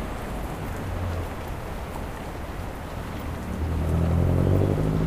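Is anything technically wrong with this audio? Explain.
Yes, there are two short dropouts from compressed frames being skipped, at about 0.68 s and 2.65 s. Each time the decoder never plays a small run of frames, either because they're missing from the file or because they were rejected as damaged. The frames here are 23.2 ms long, and each gap loses roughly a tenth of a second. The sound jumps ahead at each join.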